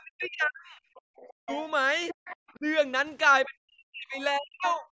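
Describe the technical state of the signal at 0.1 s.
Speech suppressed in double talk covers 0.1 s, within the span from 0.0 to 0.83 s. The echo canceller likely mistook the talker for loudspeaker echo while both sides spoke, so the voice is chopped and pushed down, at its deepest by around 40 dB.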